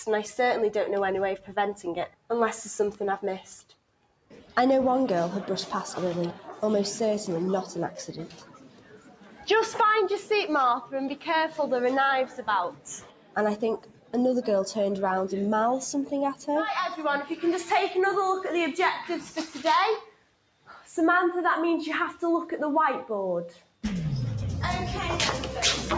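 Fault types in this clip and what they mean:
Noise suppressor applied to music or sounds: A speech noise suppressor stays active throughout. It treats steady content as noise, so the level swings by roughly 10 dB and pumps.
Sound cut by the noise suppressor: Eight held or fading passages, from 2.08 to 23.83 s, sink by up to about 12 dB while sharp onsets survive.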